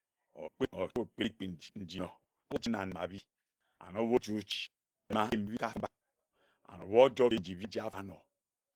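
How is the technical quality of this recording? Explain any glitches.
The recording carries plainly audible Opus compression damage from start to finish. The speech has a rough, grainy texture and a hoarse, muffled edge rather than the swirling of MP3. The likely cause is an Opus encode at a low rate, around 16 kbps, running in hybrid mode. That mode codes the lower band as speech and fills the upper bands approximately from energy envelopes. Content still reaches about 20.2 kHz, but the top end sounds noisy and grainy.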